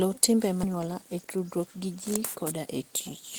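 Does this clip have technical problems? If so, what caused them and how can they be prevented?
Yes. At 0.63 to 0.65 s the speech lurches forward with no gap, a skip ahead: roughly 0.4 s of audio was dropped, either on the way or by the jitter buffer when it overflowed. A larger buffer or smarter overflow handling that time-compresses rather than discards would prevent this.

From 0.73 to 2.67 s the speech sounds hurried at unchanged pitch. This is jitter buffer speed-up running at 112%, trimming pitch periods to shed about a fifth of a second of delay. Gentler, slower buffer adaptation would keep this less noticeable.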